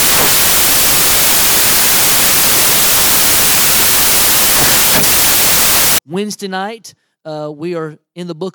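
From 0.00 to 5.98 s the speech comes with loud white noise: samples built from the wrong bytes, with low-order bits read as high-order ones. The waveform is dense hash, and the spectrogram shows flat broadband energy.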